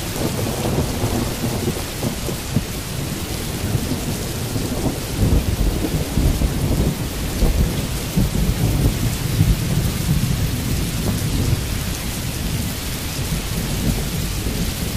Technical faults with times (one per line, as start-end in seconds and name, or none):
none